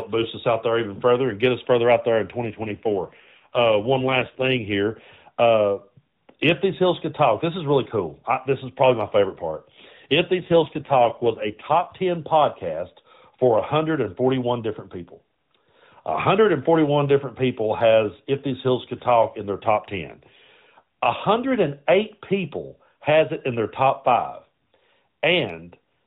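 Two AMR rate drops show up in the speech, from 2.42 to 4.73 s and again from 10.40 to 11.96 s. The band doesn't change and nothing cuts out, but the voice goes rougher and buzzier, which fits the codec stepping down from 12.2 to around 5.9 kbps.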